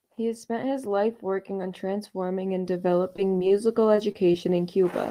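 Repeated packet loss hits this speech twice, from 2.93 to 3.52 s and again from 3.96 to 4.94 s. Short holes, the longest about 21 and 29 ms, were patched by stretching the previous sound, so the audio turns choppy and robotic, with fragments missing.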